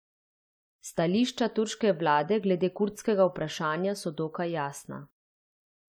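No technical faults can be heard anywhere in the speech recording; the signal stays continuous and steady throughout, with no defect to point to at any moment.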